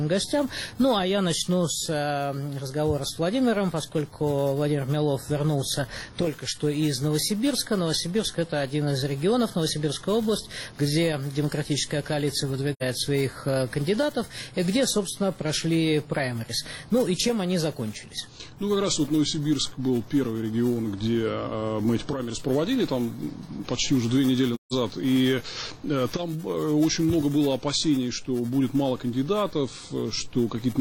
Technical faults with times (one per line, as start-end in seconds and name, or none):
12.73-12.83 AAC frame loss with muting
24.54-24.73 AAC frame loss with muting